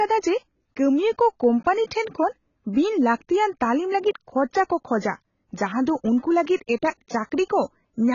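From start to finish the speech sounds dull and smeared, with nothing above about 7.1 kHz, and sibilants and held sounds take on a fizzy, warbling edge. That's most likely heavy AAC compression at a low bitrate, around 16 kbps, trimming the top and patching bands.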